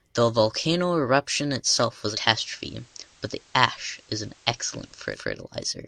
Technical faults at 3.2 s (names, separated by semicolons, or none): digital radio blending to analogue